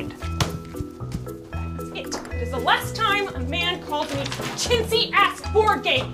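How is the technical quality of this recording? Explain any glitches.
No glitches are audible here, with no dropouts, clicks, distortion or timing disturbances anywhere in the recording.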